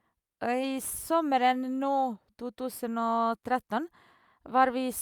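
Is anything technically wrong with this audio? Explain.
No, nothing technically wrong stood out on listening to this speech recording.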